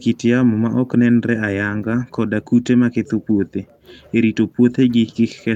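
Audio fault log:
No faults detected in this clip.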